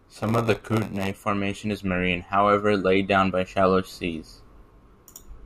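From the start to about 1.11 s the speech carries a buzz at roughly 94 Hz, the sign of a block size mismatch (padded). Each block arrives a little short and gets topped up with silence, which fits a 512-sample read. That's why the speech drags to about 0.94 times speed while the timbre stays put.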